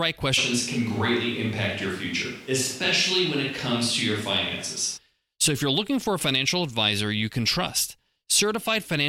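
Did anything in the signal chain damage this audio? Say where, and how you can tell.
Yes. At the driver or buffer stage there is a truncated block size mismatch throughout. A buzz at 46.9 Hz sits under the whole clip, which fits 1024-sample blocks losing their ends. The speed is barely changed. Unlike mains hum, 46.9 Hz is neither 50 nor 60 Hz, and it sounds like a rough periodic ticking rather than a tone.

From 0.39 to 4.96 s the sound turns roomy and hollow and thinner in the bass, starting and ending abruptly. The likely cause is a switch to a distant microphone. The level stays about the same, but background noise rises to roughly 30 dB below the speech. The abrupt switches and the added room noise set it apart from gradual reverb added by processing.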